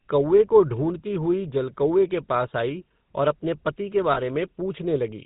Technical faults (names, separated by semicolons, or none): GSM full-rate codec; lost GSM frames